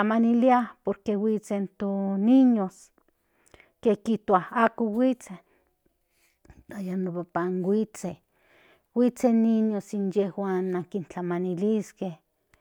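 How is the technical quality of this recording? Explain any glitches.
No technical glitches are audible.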